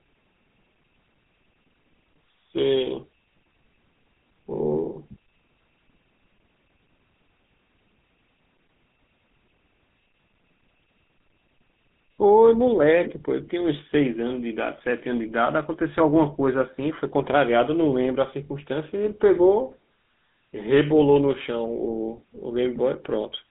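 Speech run through the GSM full-rate codec from start to finish, and the damage is plainly audible. The voice has that buzzy, gravelly grain that comes from rebuilding the excitation out of sparse regular pulses. The band sits at roughly 150 Hz to 3.6 kHz, which fits the 13 kbps mobile codec.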